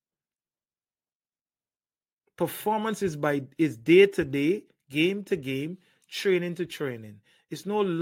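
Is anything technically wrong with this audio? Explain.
No, nothing technically wrong here.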